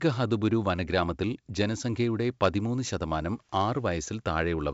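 Nothing in this speech clip stood out as a technical problem on listening.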